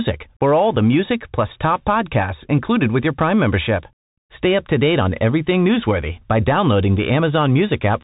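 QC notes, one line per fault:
Throughout, Bluetooth CVSD headset codec: nothing above 3.8 kHz, granular hiss, scratchy s sounds, as a one-bit up/down step lags fast changes, fitting 64 kbps.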